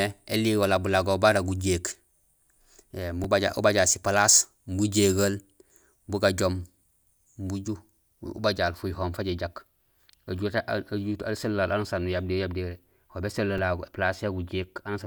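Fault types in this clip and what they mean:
Repeated buffer: the next chunk of audio arrived late, so the device replayed the last one. A 5 ms piece plays twice with a hard join. That's too short to stutter, so you hear a quick click in the speech at 3.24 s and 13.58 s.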